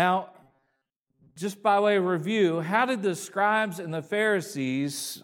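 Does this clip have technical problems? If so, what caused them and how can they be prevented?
Yes. From 0.43 to 1.36 s the speech turns into a rigid, metallic buzz at 134 Hz. This is robotic sound from repeated short buffers. The likely cause is new audio arriving too seldom. The software fills each gap by replaying the last fragment, about 7.5 ms long, while real audio is skipped. Around 70 percent of that stretch is repeats. Prevention: use a larger playback buffer and keep network delivery and processing load steady.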